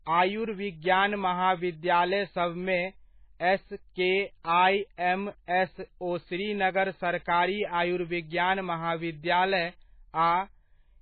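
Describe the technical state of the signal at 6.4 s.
MP3 compression damage runs through the whole clip, including 6.4 s: the speech has nothing above 4.5 kHz and a heavy watery, swirling texture, likely from an encoder starved of bits, which fits about 16 kbps, cutting the treble and dropping weak frequency lines frame by frame.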